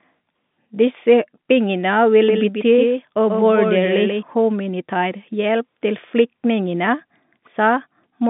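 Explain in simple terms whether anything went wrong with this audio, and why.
From 2.29 to 4.23 s, just after "pengene vil", the speech has a doubled audio track: a second, somewhat quieter copy trails about 150 ms behind, sounding like a flat stutter. It starts and stops abruptly, likely because a slower capture path recorded the speech twice.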